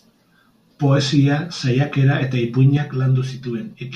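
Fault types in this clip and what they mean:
Channel delay (comb filtering): from 2.77 s to the end, one channel arrives about 5 ms late and the mono sum cancels at regularly spaced frequencies, starting near 100 Hz and repeating every 200 Hz or so, which leaves the speech hollow and phasey.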